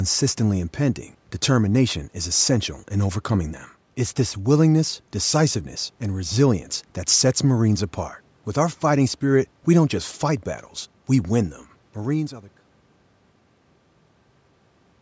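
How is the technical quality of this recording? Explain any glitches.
No glitches; the technical quality holds up.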